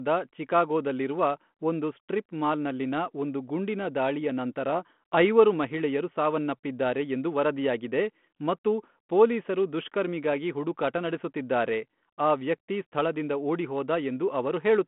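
Nothing stood out as a technical problem on listening through this speech recording.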